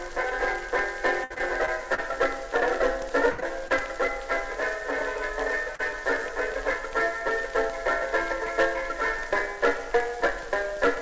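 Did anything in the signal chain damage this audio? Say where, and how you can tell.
Yes. The damage happened on the network, before the call decoder. From 1.24 to 2.00 s there is repeated packet loss, which gives a robotic sound. Five gaps fall in that stretch, the longest about 60 ms. Together they cover roughly a fifth of it. Each time the receiver extends the last sound to fill the hole, and then the next hole arrives. The result is choppy and robotic, with pieces missing.

At 3.32 to 3.40 s there is a burst of packet loss, also a network fault. About 60 ms of audio is missing. The decoder fills it by holding the last sound and fading it down. What you hear is a held buzz or a dying hiss. Then the audio jumps ahead, and the part that belonged in between is gone. This one is longer than the short dropouts that come after it.

Short concealed packet loss follows at 3.40 to 3.44 s, 3.68 to 3.72 s and 5.76 to 5.92 s. 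Each hole lasts only a few hundredths of a second. The jitter buffer patches it with a brief continuation of the last sound and then blends back into the real signal. Listen for a quick smear or wobble. At 5.76 s a patch of about 30 ms stands in for about 40 ms of missing audio. Above 8 kHz there is nothing, which fits the G.722 call codec.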